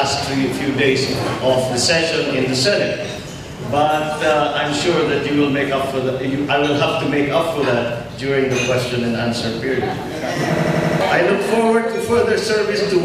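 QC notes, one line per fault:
10.58–11.01 s, system hang loop: a machine-gun stutter as one 85 ms slice of audio repeats exactly five times at 11.7 Hz. The system stalled while the hardware kept replaying its ring buffer, which fits a 4096-sample buffer, and roughly 0.4 s of audio is lost.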